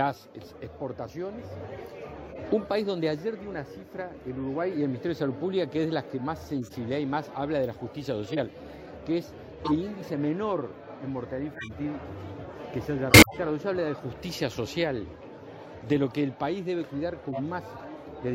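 Short chirps and noisy blips cut through the audio at 2.31, 6.60, 8.25, 9.64, 11.53, 13.10 and 17.29 s, each lasting roughly one to seven frames, loudest near 13.1 s (about -10 dBFS). These are corrupt frames decoded: damaged compressed data played back anyway, spraying energy into wrong frequencies.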